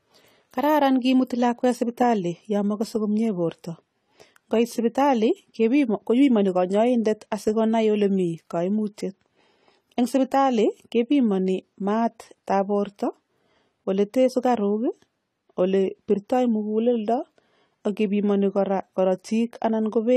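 From start to end the speech has nothing above about 14.1 kHz, sibilants fizz, and sustained sounds warble. That points to AAC compression, likely at a low bitrate near 32 kbps. The warbling and patchy spectral holes set it apart from a plain low-pass filter.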